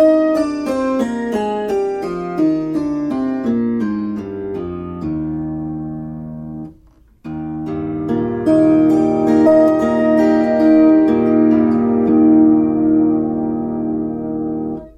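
Damaged data in a compressed stream shows up twice, at 9.45 s and again at 12.08 s, each as a brief glitch lasting under 20 ms. At both points some of the compressed data was corrupted, so the decoder could not read those frames properly. It lost sync and then searched for the next valid frame header before the sound carried on.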